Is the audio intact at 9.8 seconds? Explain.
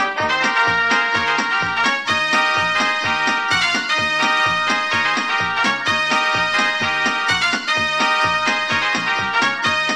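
Yes, the audio is intact at 9.8 seconds, with no dropout, click, distortion or other technical fault at that point.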